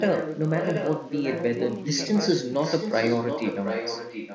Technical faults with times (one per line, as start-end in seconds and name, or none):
0.00-4.35 filter restarted on every block
0.00-4.35 echo leak